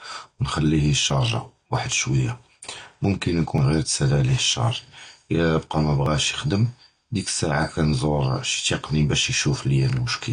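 AAC compression runs through the whole of this speech recording. Nothing is heard above 9.5 kHz, and the remaining spectrum sounds dull and smeared, with fizzy sibilants, which fits a low bitrate around 32 kbps, likely AAC-LC discarding and coarsely quantising high-frequency detail. Audio missing between chunks causes brief skips at 1.10, 3.58, 6.06 (just before "יִחְדֵמ זַכִי סַעָה") and 8.54 s, roughly every 2.5 s. Each drops around 20 ms, with the edges butted together, likely a processing stage losing a sliver while handing over between fixed-length chunks.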